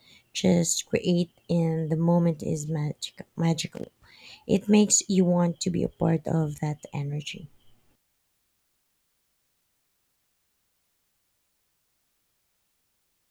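Speech, with loose connector crackle from 3.74 to 4.17 s: an irregular burst of scratching as a worn contact chops the signal, unlike evenly spaced digital clicks.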